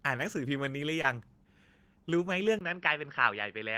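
At 1.01 to 1.06 s there is a short concealed packet loss. A burst of audio arrived too late for the decoder. For about 23 ms the receiver covered the roughly 20 ms gap by extending the preceding sound before the real signal resumed. It comes across as a quick smear. On a spectrogram the filled stretch looks copied from just before it, ending in a soft seam.

From 2.59 s to the end the sound suddenly turns duller and boxier, most likely because the input switched to a poorer device. A gap of about 20 ms marks the changeover. After it, nothing reaches above 5.6 kHz, the level falls by around 5 dB, and a new background hiss sits roughly 50 dB below the signal. A spectrogram shows a hard ceiling at 5.6 kHz, a thin vertical blank at the switch and a faint new noise floor. The waveform envelope steps down slightly.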